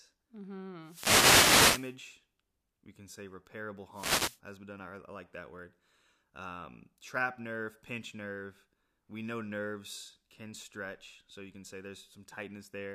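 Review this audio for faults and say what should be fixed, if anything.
Two wireless microphone noise hits sound as brief swishes of static, at 0.82 to 1.97 s and at 3.91 to 4.40 s, just after "we can say repairable". The FM signal fades through reflection cancellation and receiver noise swells. Unlike steady hiss, it rises and falls abruptly. Fix with diversity receivers and careful antenna placement.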